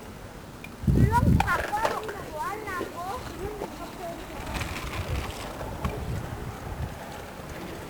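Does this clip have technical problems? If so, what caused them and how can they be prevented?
Yes. Throughout the clip, the audio has been squeezed through 1-bit DFPWM compression, which keeps only a single bit per sample to nudge an adaptive level up or down instead of recording the actual waveform. That crude tracking leaves heavy, broadband quantisation noise, so the whole sound turns fuzzy and crackly and its treble disappears under hiss, damage which fits a rate around 48 kbps. To prevent it, store or transmit the audio with a multi-bit codec at an adequate bitrate.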